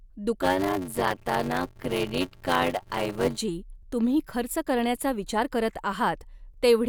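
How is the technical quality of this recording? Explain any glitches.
The recording has one glitch, in the early part of the speech. From 0.42 to 3.38 s, a block size mismatch (padded) occurs. Each written block falls short of the reader's block, which fits a 512-sample buffer, and zeros fill the rest. Speech slows to 0.625 speed with its timbre intact and a 93.8 Hz buzz. The waveform shows regular flat gaps, and the spectrogram shows evenly spaced vertical stripes.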